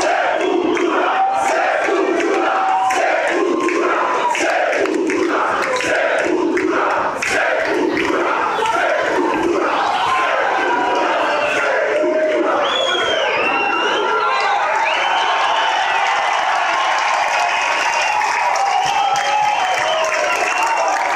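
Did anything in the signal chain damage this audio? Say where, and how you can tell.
No, nothing along the signal chain audibly damaged this audio, and it reaches the listener intact at every stage.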